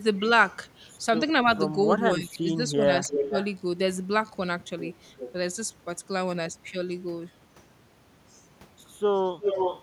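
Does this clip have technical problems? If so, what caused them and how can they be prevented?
Yes. The speech gets suppressed in double talk from 2.18 to 2.89 s and again from 3.1 to 3.35 s. The level dips by up to about 20 dB in the first stretch, covering around half a second in total, and by about 15 dB in the second. The likely cause is both ends talking at once: the echo canceller couldn't tell the local talker from loudspeaker echo and turned everything down. Using a full-duplex-capable canceller, or a headset at the far end, would prevent it.

There's also an echo leak, a copy of the speech arriving 361 ms late, at 3.04 to 3.47 s, 5.07 to 5.32 s, and 9.16 s to the end. In the first and last stretches the echo is roughly as loud as the speech itself, while at 5.07 s it sits much lower, around 15 dB down. It's likely coming from a speakerphone whose canceller didn't fully remove what its mic picked up from the loudspeaker, so the remainder got sent back. 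Headphones, or a properly converged echo canceller on that device, would stop it.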